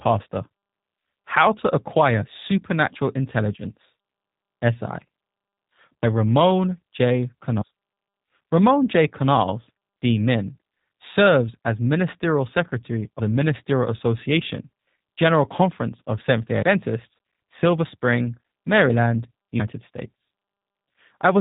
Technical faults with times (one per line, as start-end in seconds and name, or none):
0.00-21.41 G.729 codec